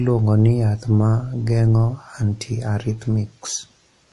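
Across the whole recording the speech sounds watery and swirly, with the sibilants turning metallic and consonant attacks smeared, and nothing reaches above about 11.3 kHz. This is most likely MP3 compression at a low bitrate, around 49 kbps by the sound of it. Short of bits, the encoder has cut the treble at a fixed point and dropped weak frequency lines that flicker on and off between frames, which gives the plainly audible codec damage.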